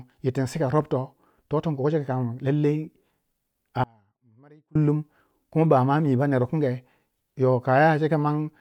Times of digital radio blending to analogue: none

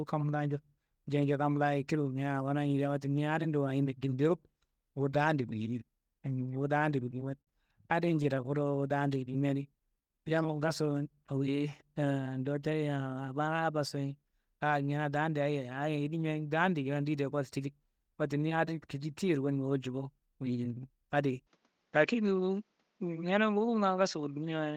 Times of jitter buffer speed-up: 12.38-13.78

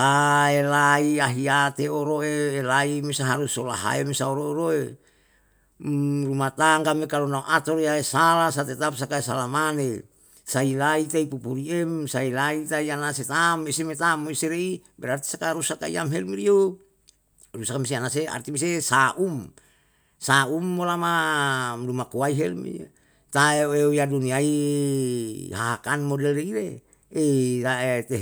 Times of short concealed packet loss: none

